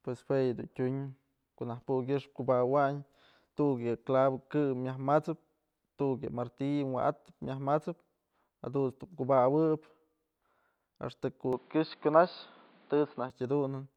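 Speech, with a sudden drop in quality from 11.53 to 13.30 s. Nothing above 4.9 kHz survives there, so the sound turns dull and boxy. The level shifts by about 5 dB. A new noise floor appears, roughly 35 dB down. There is no gap at the change. The likely cause is an input switched to a poorer device.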